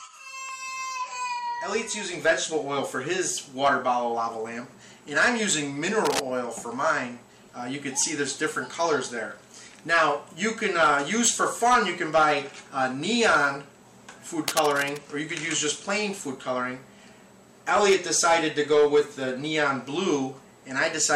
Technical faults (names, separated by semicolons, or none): cable scratch noise